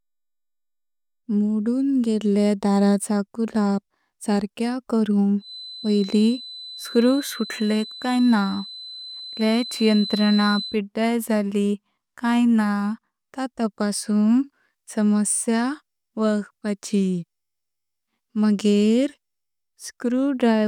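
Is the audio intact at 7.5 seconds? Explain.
No. From 5.37 to 10.81 s a feedback whistle sits at 4 kHz, roughly 15 dB below the speech, likely from a loudspeaker-to-microphone loop held just at the feedback point.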